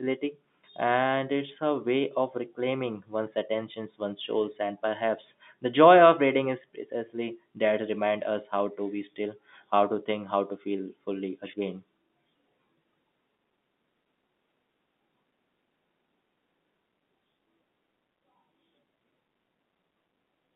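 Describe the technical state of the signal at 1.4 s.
At 1.4 s the signal is intact, with only the narrow telephone band of the G.711 telephone coding audible, running from about 150 Hz up to 3.6 kHz.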